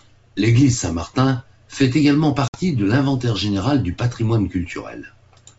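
Packet loss on an ADPCM call breaks this speech clip, carried over G.722 wideband coding, from about 2.48 to 2.58 s: roughly 60 ms of a few packets vanishes after "fait également", leaving a hard-edged silent gap, and the decoder's predictor lags, so "de l'inventaire général du" re-enters slightly distorted.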